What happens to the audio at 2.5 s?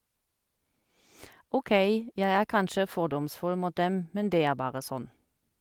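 At 2.5 s you're in the middle of repeated timing corrections running from 0.58 to 5.50 s. The receiver keeps padding in short repeated slices, adding something like 150 ms overall, so the speech drags at about 98% speed. That's clock drift between sender and receiver: the sender's clock runs roughly 2% slow, so the jitter buffer keeps draining.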